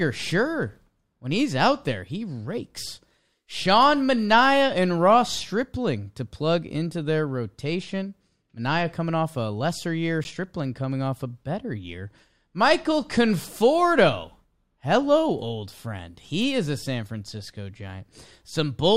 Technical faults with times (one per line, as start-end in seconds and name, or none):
10.24 block of digital silence